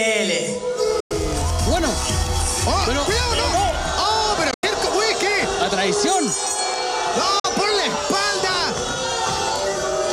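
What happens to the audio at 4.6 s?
The sound cuts out from 4.51 to 4.64 s, with about 100 ms of silence broken into gaps, the longest about 87 ms. It then resumes further on, as if it had kept playing. This is a Bluetooth dropout, likely from wireless packets arriving too late and being discarded.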